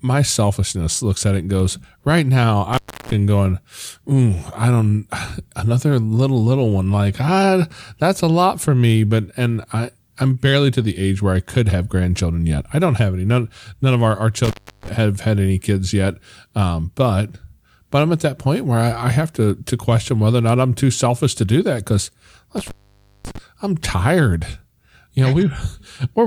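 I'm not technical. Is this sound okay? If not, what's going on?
No. The speech has an intermittent contact fault: a loose cable or plug briefly loses its connection, so the sound drops out with a crackle as the contact breaks and remakes. It happens three times, from 2.73 to 3.13 s, 14.44 to 14.89 s, and 22.58 to 23.38 s. The gaps last about a third of a second in the first two and just over half a second in the last, leaving faint hiss.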